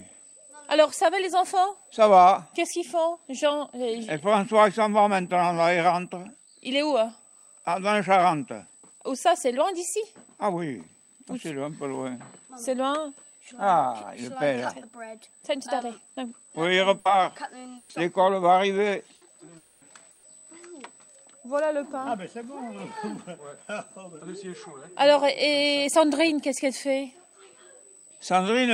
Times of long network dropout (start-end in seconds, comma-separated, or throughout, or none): 19.57-19.84